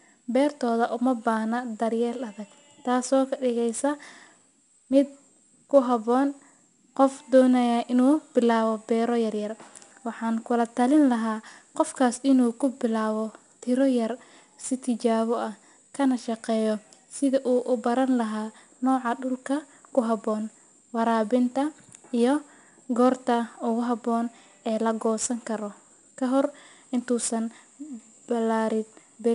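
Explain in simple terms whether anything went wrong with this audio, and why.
4-bit ADPCM compression runs through the whole clip. This format saves space by storing each moment of sound as a small step from a guess about where the sound is heading, using only sixteen possible steps. Those rough steps leave a gritty hiss riding on the louder parts of the speech, and sudden sounds get roughened because the steps can't grow quickly enough. Nothing is heard above about 10.6 kHz, which points to a low sample rate and gives the speech a dull edge.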